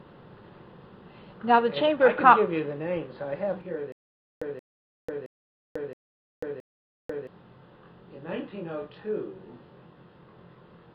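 From 3.61 s to the end, a channel delay of roughly 20 ms causes comb filtering: summed to mono, the sound turns rough and slightly doubled, and a spectrogram shows evenly spaced notches from around 20 Hz upward.

From 3.92 to 7.27 s, a stutter with silent gaps, likely from a stalled stream, replays a 176 ms fragment five times with 493 ms of flat digital silence between, one cycle every 670 ms.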